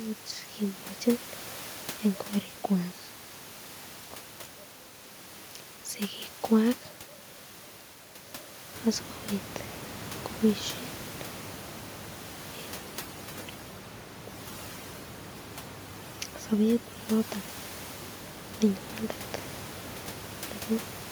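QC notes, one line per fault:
12.78–17.48 s overdone noise removal: bands near the noise floor are cut hard, leaving twinkling near-silence, unlike the room noise elsewhere.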